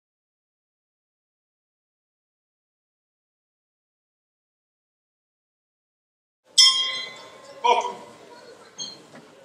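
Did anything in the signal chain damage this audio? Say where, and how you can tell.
No, nothing in the signal chain audibly damaged this audio. None of the stages, from capture and conversion through to storage and playback, leaves a mark that points to a problem.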